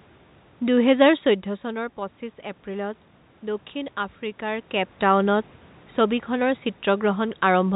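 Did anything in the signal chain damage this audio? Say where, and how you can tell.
No, nothing damaged it.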